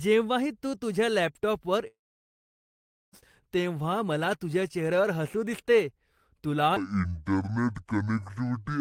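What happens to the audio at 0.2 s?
Nothing goes wrong at 0.2 s; the audio is intact at that moment.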